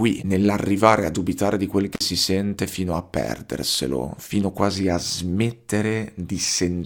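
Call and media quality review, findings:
Dropped samples, likely: a few samples missing from the stream, well under a millisecond, so the waveform steps abruptly to a later value. Symptom is a single sharp click with a thin vertical line in the spectrum, at 1.39 s just before "di quel" and again at 3.75 s.

Intermittent contact: loose cable or plug briefly opening the signal path, 1.94 to 2.01 s, open for about 47 ms, between "di quel" and "si sente". Audio cuts out with crackle at both edges, leaving faint hiss while the line is open.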